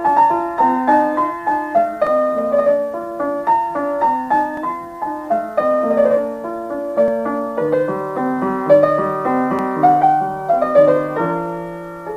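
Overlapping chunks: audio blocks of about 2.5 s each start 7 ms early, so a sliver repeats, giving short clicks at 2.07, 4.57, 7.08 and 9.59 s.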